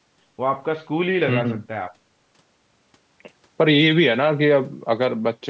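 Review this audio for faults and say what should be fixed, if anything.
Nothing needs fixing here.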